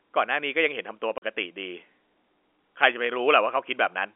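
At 1.18 s the speech drops into a 40 ms hole of packet loss filled with silence, which fits two lost 20 ms packets. The gap has hard edges that show as a flat waveform gap and a blank vertical stripe on the spectrogram. The G.711 telephone line keeps everything between 300 Hz and 3.4 kHz.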